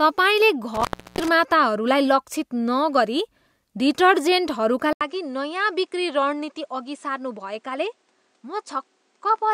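Around 0.75 to 1.28 s there's an intermittent contact fault: a loose connection drops the speech for about a third of a second, with crackle either side.

At 4.93 s the sound goes quiet for about 80 ms and then comes back duller, a bit lower in level and with a new faint background noise. Nothing gets through above 9.9 kHz from then to the end. That's likely the input switched to a poorer device.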